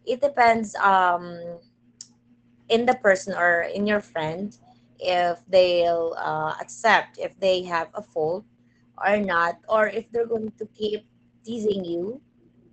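From start to finish the speech carries a steady 25 Hz buzz, the sign of a filter restarted on every block. Each block begins from a cleared filter state, so a small transient fires at every boundary, which fits blocks of about 40 ms. The ticks fuse into a rough buzz that grows louder as the speech gets louder. On a waveform, evenly spaced spikes sit 40 ms apart; a spectrogram shows thin vertical lines at that spacing, strongest in louder passages.

Across the whole clip the speech also shows plainly audible Opus voice compression in its SILK linear-prediction mode at wideband. The coarse coding of the excitation makes the speech sound muffled, hoarse and slightly robotic, which points to a low bitrate of around 12 kbps. A spectrogram shows nothing above about 8.7 kHz, with a hard ceiling across the whole clip. Below that ceiling the harmonics look smeared and blocky in steps that fit 20 ms frames.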